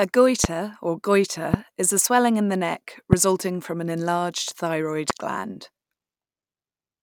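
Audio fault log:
0.44–0.47 s, 1.54–1.56 s, 3.13–3.15 s, 5.10–5.12 s: loud pop. Four single, sharp pops about 15 to 20 dB above the speech, each lasting about 26 ms, with the speech continuing underneath. Each is likely a brief voltage pulse from a connector, switch or driver glitch added to the signal.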